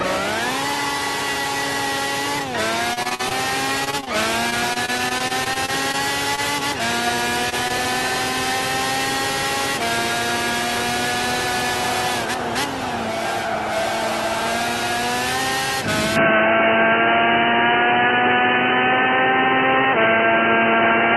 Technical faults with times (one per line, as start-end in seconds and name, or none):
2.93-3.32 repeated packet loss (robotic sound)
3.84-4.08 repeated packet loss (robotic sound)
4.50-5.95 repeated packet loss (robotic sound)
6.35-6.39 short stall from a late packet
7.49-7.54 short stall from a late packet
7.68-7.71 short concealed packet loss
16.16-21.16 input switched to a poorer device